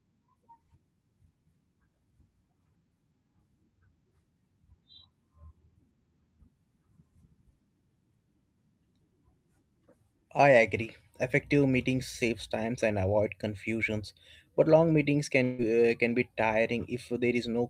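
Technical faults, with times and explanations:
15.43–15.61 s, long network dropout: just after "confusions but long meetings" the sound becomes a fading buzz for about 150 ms and resumes with a gap, likely from lost packets that concealment could not cover.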